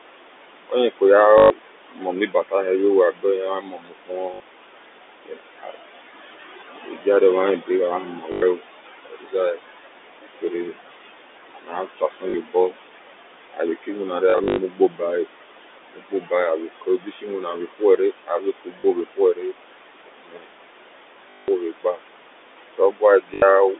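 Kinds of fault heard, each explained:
Noise suppressor artifacts: The suppressor pulls down every band it judges to be steady noise, frame by frame. The room noise sinks by about 21 dB between phrases. It swells back up under the speech, so the background pumps along with it.
Speech cut by the noise suppressor: The suppressor mistakes parts of the speech for noise. It turns them down with the background, by up to about 22 dB. Soft consonants and word endings sound swallowed or faint. Roughly nine seconds across most of the clip are affected.
Packet loss with last packet repeated: Lost packets are filled by replaying the last good one. Longer runs buzz as a short robotic stutter, which fits 20 ms packets. Eight gaps of 40 to 180 ms occur from 1.38 s to 23.34 s.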